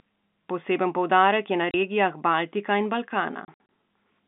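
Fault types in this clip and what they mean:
Packet loss filled with silence: at 1.71 s, right after "poudarek je na", a 30 ms hole points to one lost 30 ms packet. From 3.45 to 3.69 s about 120 ms drops out in gaps up to 60 ms long. Missing audio becomes silence, leaving hard-edged gaps.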